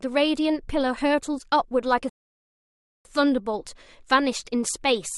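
Right at 2.09 s the speech just drops out to dead silence, and it stays that way until about 3.05 s, so you get close to a second of nothing, roughly 0.96 s. That's a rebuffering stall: playback ran through everything it had downloaded and had to sit and wait for more data. When the sound comes back it picks up exactly where it stopped, so nothing is skipped, but that gap stretches the clip out.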